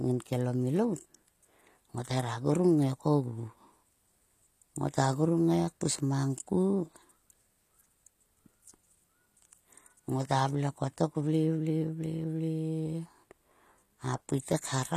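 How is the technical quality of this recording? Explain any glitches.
The recording has plainly audible compression damage. HE-AAC compression, throughout: the treble is likely rebuilt by spectral band replication at a low bitrate, perhaps around 24 kbps, so s sounds turn gritty and metallic, with nothing above 14.9 kHz.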